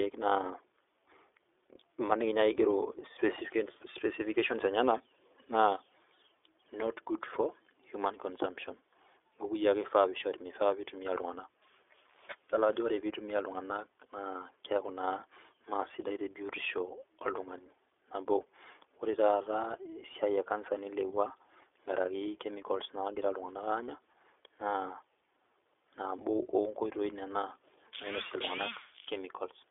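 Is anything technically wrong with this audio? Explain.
Yes. The speech carries iLBC codec damage for its whole length. Nothing above about 3.7 kHz survives, and the lows are thin. Each 20 ms frame's excitation is coded independently, leaving a plainly rough, synthetic edge. This fits the 15.2 kbps mode.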